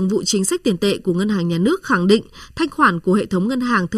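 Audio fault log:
Throughout: channel delay (comb filtering). The speech sounds hollow and phasey, with a fixed boxy colour. One channel arrives under a millisecond late, so the mono sum cancels at evenly spaced frequencies, the first notch falling somewhere around 700 Hz.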